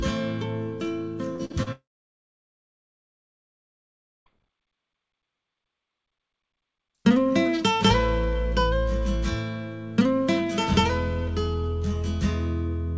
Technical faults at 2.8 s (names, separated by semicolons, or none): long network dropout